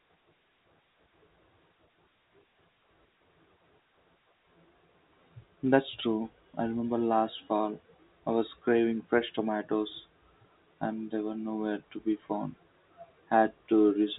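No faults to report: the speech sits inside a telephone band with nothing above 3.8 kHz, consistent with G.711 coding at 64 kbps, and any coding noise is faint at most.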